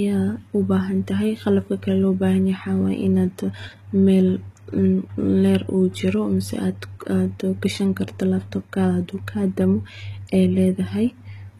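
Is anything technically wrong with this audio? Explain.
Yes. Throughout the speech, the treble sounds bright but synthetic: s sounds come out gritty and lispy, with a metallic sheen, and nothing is present above about 14.9 kHz. This is likely HE-AAC compression at a very low bitrate, consistent with roughly 20 kbps. The lower band is coded directly, while the upper band is rebuilt by copying lower bands upward under a coarse envelope, so its harmonics don't line up with the real ones. A plain low-pass would sound dull instead, and ordinary low-bitrate AAC or MP3 artefacts would sound more warbly and swirling.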